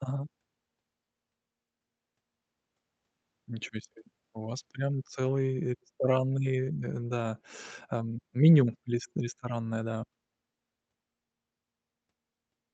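Speech with no technical faults. It has passed through a WebRTC call path, and its highs stop at about 8 kHz, which fits Opus running in wideband mode at a moderate bitrate such as 32 kbps.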